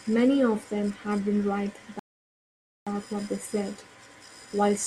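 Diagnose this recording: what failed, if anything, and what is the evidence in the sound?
A rebuffering stall occurred at the playback stage. At 1.99 s the speech cuts to silence, and it stays silent until 2.87 s. Then it resumes exactly where it stopped. Nothing is skipped or repeated. The gap simply adds about 0.87 s to the timeline. The player ran out of downloaded audio. It halted output and waited for more data to arrive. It restarted once the buffer refilled, so delivery was late, not lost.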